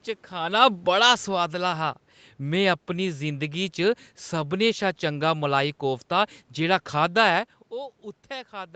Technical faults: automatic gain falling; lost packet rebuilt from error correction

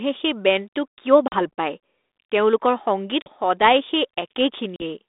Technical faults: packet loss on an ADPCM call

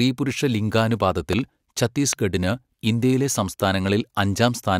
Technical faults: loud pop

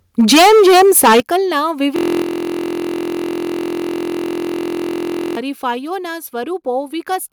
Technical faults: microphone overload; microphone volume stepped down

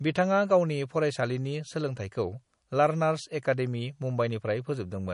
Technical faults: MP3 compression

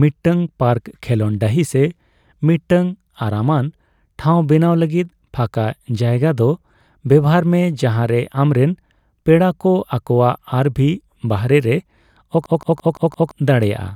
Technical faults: system hang loop

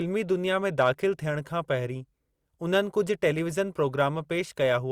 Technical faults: hard clipping

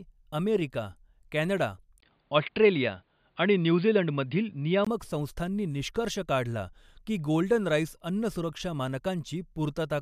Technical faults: input switched to a poorer device

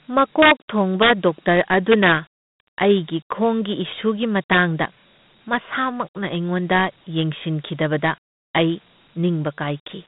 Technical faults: Dialogic VOX ADPCM; integer overflow

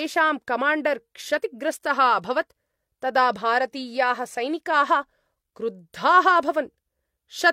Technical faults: none

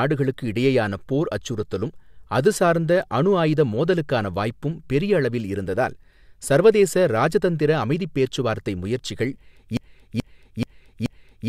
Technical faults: broken-record loop

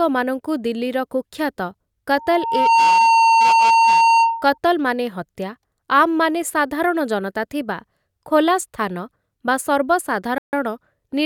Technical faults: loudspeaker feedback squeal; Bluetooth stall

